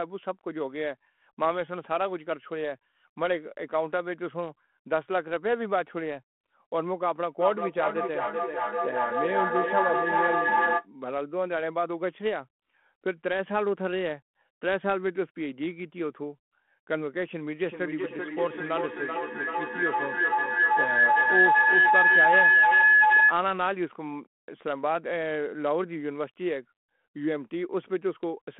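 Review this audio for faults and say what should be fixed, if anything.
From 7.4 to 10.89 s, each phrase returns at a steady interval of around 0.4 s, thinner and more ringing with each pass. The repeats pile up to about 2 dB above the speech instead of dying away. This is feedback echo between two devices: two devices in the same room share the call, one plays what the other's microphone sent, and that microphone picks it up again. Neither device's echo canceller removes sound played by the other device. To prevent it, only one device in the room should have both its microphone and loudspeaker active, or the second device should join muted with its speaker turned off.

From 17.64 to 23.4 s, a tone around 1.5 kHz swells to about 8 dB above the speech, with the loop delay still roughly the same 0.4 s. This is feedback howl. The same room loop now gains level on each trip, and the repeats narrow to the frequency the loop favours until the loop is broken. 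To prevent it, mute one device as soon as the echo starts, and keep a single active device per room.

The narrow telephone band throughout, with only light grit on the speech, fits a 32 kbit/s G.726 ADPCM link.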